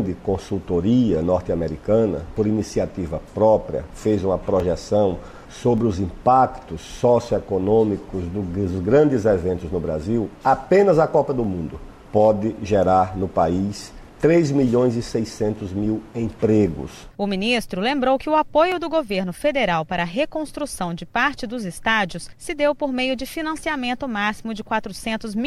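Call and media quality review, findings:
Dropped samples, likely a brief gap in the capture or transport stream: four isolated sharp clicks at 4.60, 5.78, 11.44 and 18.72 s. Each loss is well under a millisecond, so no sound is audibly missing. The waveform jumps straight from one value to a later one, and that discontinuity shows as a thin vertical line across the spectrum. Irregular spacing, no repeating interval.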